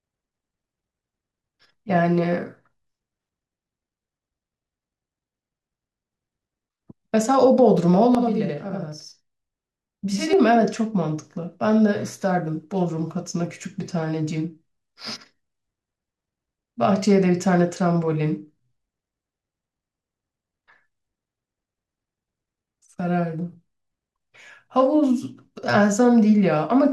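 From 8.15 to 10.33 s the speech carries a channel delay (doubling): one channel lags by about 85 ms, which fits a 4096-sample buffer, and the mono sum gives a discrete equal-level slap repeat. Unlike comb-filter phasing, the copy is heard separately, not as coloration.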